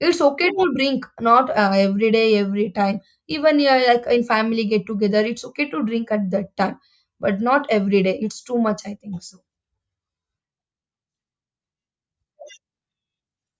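Nothing in the speech here points to a technical fault, so there's nothing to flag at any point in the recording.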